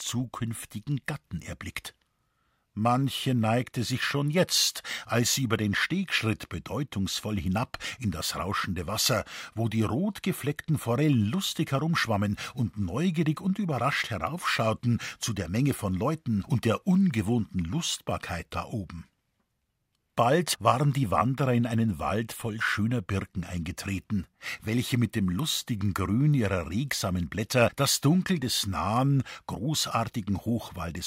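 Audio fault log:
Listening to the speech recording, nothing stood out as a fault at any point.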